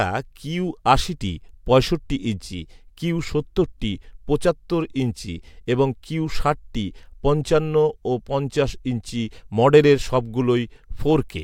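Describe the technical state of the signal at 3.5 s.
At 3.5 s the speech signal is intact, with no audible technical fault at that moment.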